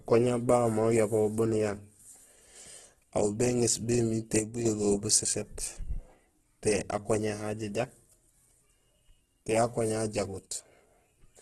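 From the start, the speech carries heavy Opus compression damage. Nothing is heard above about 12.1 kHz. Tones sound rough, grainy and noisy rather than swirly. This fits a low rate near 12 kbps in the music (CELT) mode, the likely cause.

At 4.39 s, just after "aw béŋéés bémiir té", one channel likely drops out until 4.65 s. The level falls abruptly by about 6 dB. Sound shared by both channels loses half of its mono sum. The same drop recurs from 10.47 to 10.66 s, likely from the same channel loss.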